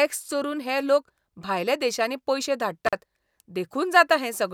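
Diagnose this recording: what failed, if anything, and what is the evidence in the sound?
The analogue wiring failed: an intermittent contact, a loose cable or plug, briefly opened the signal path. Just after "देशांनी पयशे", from 2.87 to 2.93 s, the speech drops out for about 44 ms, with crackle at both edges and faint hiss while the connection is open.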